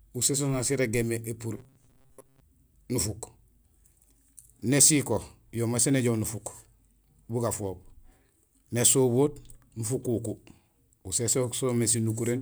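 From 1.58 to 2.4 s, robotic sound from repeated short buffers: a rigid metallic buzz near 133 Hz, likely from repeating a 7.5 ms slice, unlike smooth pitch drift.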